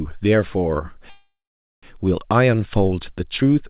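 Speech heard through a narrowband call path, with nothing above 4 kHz, which fits G.711 telephone coding. At 1.1 s the sound turns into a fading buzz or hiss, then roughly half a second of silence, resuming at 1.85 s without lost material, so everything after arrives about 0.73 s late. This is a call audio freeze, likely from delayed packets draining the jitter buffer. A spectrogram shows a smeared, decaying band, then a blank gap, while the waveform tapers to a flat line.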